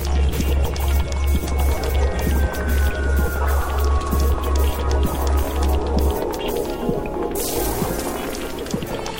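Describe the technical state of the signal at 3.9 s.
At 3.9 s the sound carries sample clock jitter, present throughout the clip. Timing wobble of roughly 5 microseconds creates errors that scale with waveform slope, adding hiss about 25 dB below the signal. On a spectrogram, diffuse noise rises under loud, bright passages and vanishes in silence.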